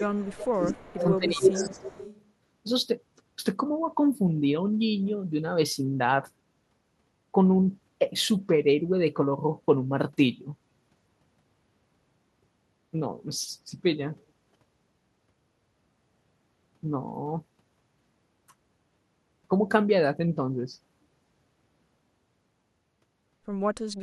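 An echo canceller on a loudspeaker phone, likely, failed to subtract its own playback, so this speech clip carries an echo leak: a copy of the voice returns about 225 ms late, from 0.00 to 0.18 s, 0.44 to 1.18 s and 1.35 to 2.24 s. It climbs from about 20 dB below the speech to about 5 dB below. The same canceller, likely unable to separate talker from echo, shows speech suppressed in double talk from 0.00 to 0.62 s and 0.89 to 1.86 s. There the voice dips by up to roughly 25 dB and then about 15 dB.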